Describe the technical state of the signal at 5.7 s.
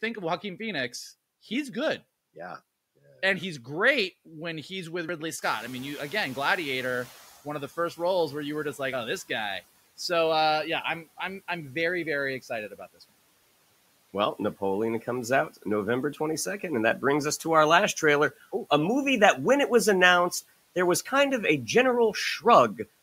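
At 5.7 s the background noise comes through only lightly reduced, then sinks over the next two seconds to about 10 dB lower. The noise suppressor is catching up (5.42 to 7.38 s): the room noise jumped by about 15 dB around 5.5 s, and the suppressor's noise estimate took about 1.96 s to adapt.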